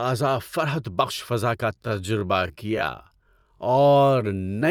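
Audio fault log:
1.71–4.70 s, time-stretched section: after "فضا کا" speech drops to 0.53x speed at unchanged pitch, dragging, likely from software repeating short pieces to lengthen it.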